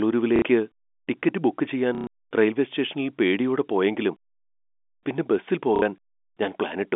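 Speech over a telephone line, with packet loss with the last packet repeated. At 0.36 s, about 60 ms of sound stutters. At 1.95 to 2.07 s, right after "ടിക്കറ്റ് ബുക്ക് ചെയ്യാൻ", a longer 120 ms robotic buzz plays. At 5.76 s, after "പിന്നെ ബസിൽ", another 60 ms stutter follows. The buzz rate fits 30 ms packets. The band stops near 3.5 kHz, as expected for G.711.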